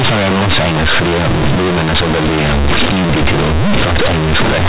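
Companded audio read as linear runs from start to finish: mu-law G.711 bytes are played back as plain 8-bit linear samples without expansion, so every sign change throws the output across half its range, flattening quiet and loud speech into harsh, very loud buzzing distortion with heavy noise in pauses.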